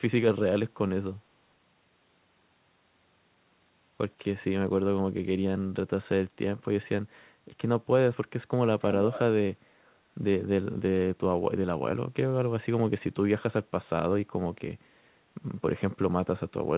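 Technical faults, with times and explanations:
9.13–9.2 s, echo leak: a brief scrap of the speech returns about 269 ms late and around 10 dB quieter than the talker. It is likely the far end's loudspeaker output reaching its microphone and slipping past an incomplete echo canceller.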